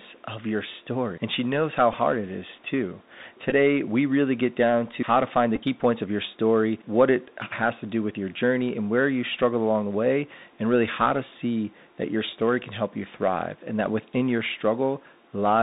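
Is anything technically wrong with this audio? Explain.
Yes, two things stand out. The whole clip goes through the Bluetooth CVSD headset codec: nothing gets above 4 kHz, s sounds come out scratchy, and there's a grainy hiss under the speech. That's the one-bit up/down coder, which fits 64 kbps, with its adapting step falling behind loud high content. The room noise, about 33 dB down, is just the room.

There are also three Bluetooth headset packet repeats, where lost packets were filled by decoding the previous packet again. At 1.93 s, between "she knows how" and "it is too," and at 3.5 s, before "we really get down," you hear short bursts of buzz. Around 5.56–5.60 s, between "how to find the" and "key points of your," the gaps are scattered, with the longest run about 10 ms, so it turns into a brief buzzy roughness.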